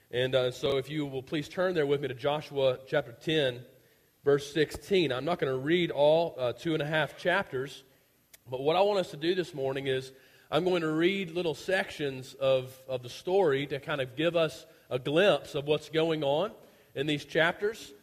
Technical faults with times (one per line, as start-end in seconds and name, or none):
0.66-0.72 chunks out of order